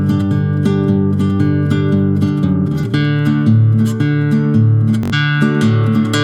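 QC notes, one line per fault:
5.03–5.14 s: Bluetooth stutter. The receiver ran short of audio data and replayed its last buffer, giving a brief machine-gun buzz. About 85 ms of sound never arrives, which points to four dropped frames of roughly 21 ms each, and playback resumes afterwards.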